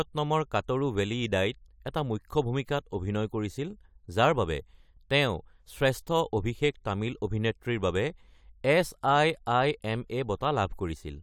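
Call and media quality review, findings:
No faults found in the speech sample. Nothing to raise against capture, transport or playback for this item.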